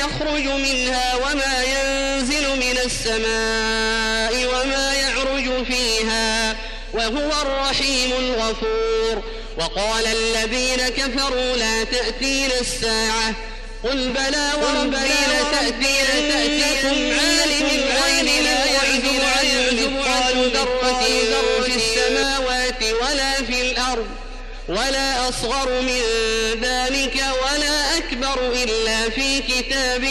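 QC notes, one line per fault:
14.09–22.23 s, doubled audio track: a second full-band copy of the sound runs roughly 0.7 s behind, about as loud as the original, with no decay or room colour, and it appears and vanishes abruptly, likely from a slower second capture path or an out-of-step edit.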